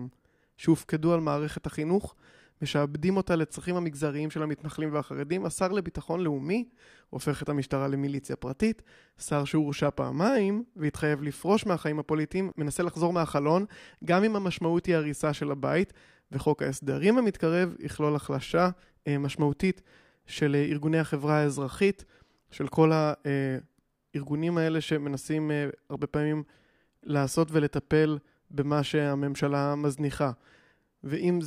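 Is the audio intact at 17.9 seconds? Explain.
Yes, the speech at 17.9 seconds plays through intact, with no dropout, click, distortion or other fault at that moment.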